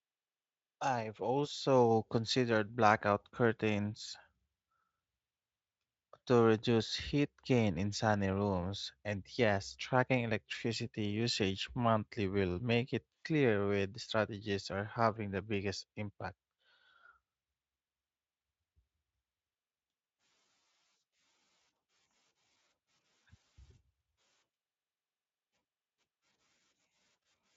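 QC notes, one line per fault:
No faults to note in this speech clip.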